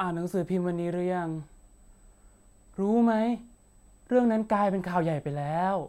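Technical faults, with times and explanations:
Throughout, USB whine: there's a thin, steady tone sitting at 8 kHz under the speech the whole way through, roughly 40 dB below the signal. That pitch is the giveaway: USB high-speed traffic runs in 125 microsecond microframes, and the current the bus pulls at that rate is getting into the audio path through shared power or ground, leaving a fixed-pitch whine that never drifts.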